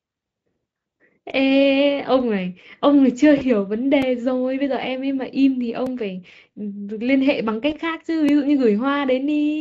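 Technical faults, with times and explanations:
2.20 s to the end, DC step: the signal's zero line jumps at 2.20 s and stays offset for the rest of the clip, as happens when an input carrying a DC offset is switched in or a converter recalibrates mid-stream. The sudden shift of the whole waveform is heard as one low thump or click at that moment. The offset itself is inaudible, so the speech carries on at the same level and tone across the step and afterwards.
3.37 to 3.44 s and 7.70 to 7.75 s, VoIP packet loss concealed by the speech codec: packets went missing in transit, about 40 ms at the first spot and 20 ms at the second, which points to two lost 20 ms frames and then one. With nothing to decode, the Speex decoder, which otherwise has faint or no audible codec damage here, extended its last pitch and spectral shape while lowering the gain frame by frame. The speech smears into a fading buzzy or noisy tone, and it stays weak or distorted for tens of milliseconds after the packets resume.
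4.02 s, 5.86 s and 8.29 s, block of digital silence: at each point a short run of samples was replaced by zeros, most likely because the output buffer was not filled in time. The second gap, about 2.9 ms long, fits a 128-sample buffer, and the others last about 4.1 ms and 1.5 ms. The speech drops out and returns with no fade, and gaps this short are heard as a tick or dip rather than as silence.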